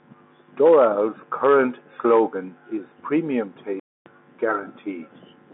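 A speech recording carried over a telephone line shows a playback stall from 3.80 to 4.06 s: the sound halts mid-flow for about 265 ms of silence and then resumes. The likely cause is the player running short of buffered data or having its output thread blocked. On a waveform this appears as a flat, near-silent gap. A spectrogram shows a clean vertical blank band across all frequencies. The G.711 mu-law telephone coding can be heard as a narrow 250 Hz to 3.6 kHz line band, with the spectrogram empty above 3.8 kHz.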